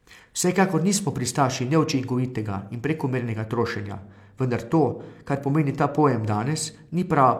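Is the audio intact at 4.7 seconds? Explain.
Yes, the audio is intact at 4.7 seconds, with no fault audible at that moment.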